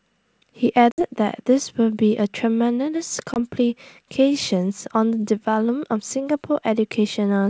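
At 0.92 s the speech drops into a hard-edged hole, packet loss on an ADPCM call, with 60 ms gone, around three packets' worth, filled with silence. The decoder's predictor and step size lose track of the sender's, so when audio resumes near 1.03 s it comes back with some roughness. At 3.34 s a shorter 20 ms gap, roughly one packet, does the same briefly, all within the wideband G.722 sound.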